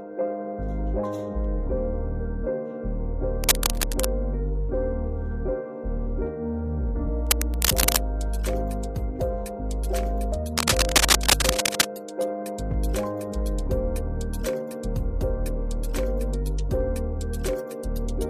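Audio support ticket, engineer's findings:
Dense, uneven scratching bursts over the sound at 3.44–4.06 s, 7.27–8.02 s and 10.58–11.85 s, roughly level with the signal, the last one louder. Cable scratch noise, likely from a worn cable, connector or control whose contact resistance fluctuates when moved.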